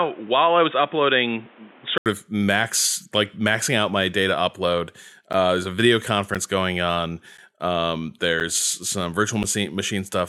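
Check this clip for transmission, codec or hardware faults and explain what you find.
Two faults are audible: an input-device switch and periodic dropouts.

The first is most likely an input switched to a poorer device. From the start until 2.06 s the recording seems to come from a lesser microphone or a headset call profile, which passes nothing above 3.8 kHz. The sound is dull and boxy, with background noise roughly 30 dB below the signal. Level stays about the same. At 2.06 s an 80 ms silence marks the switch, and the full bandwidth returns.

The second is periodic USB or driver dropouts between 5.33 s and 9.44 s. At a steady 1.024 s interval, something stalls the bus or driver, and about 10 ms of audio is lost each time and replaced by silence. There are around five of these gaps. Each one is heard as a regular tick or pop cutting into the signal, evenly spaced, like a metronome running under the audio.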